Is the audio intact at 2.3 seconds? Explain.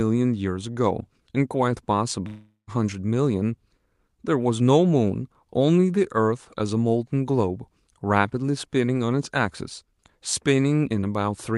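No. From 2.27 to 2.70 s the speech smears into a fading buzz, then brief silence. It is likely a long network dropout that lost about 400 ms of audio.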